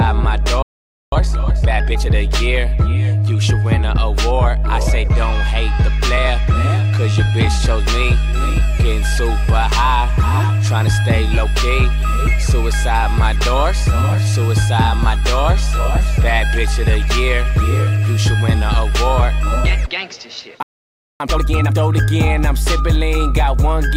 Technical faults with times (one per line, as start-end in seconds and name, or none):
0.62-1.12 playback stall
1.12-2.10 time-compressed catch-up
20.63-21.20 playback stall
21.20-21.76 time-compressed catch-up